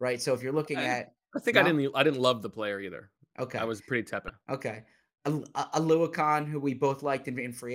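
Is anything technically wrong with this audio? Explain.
Yes. Damaged data in a compressed stream appears from 4.26 to 4.29 s in this speech: corrupted bytes make the decoder misread those frames and lose sync while it hunts for the next valid frame header, producing a brief 33-millisecond squawk or blip.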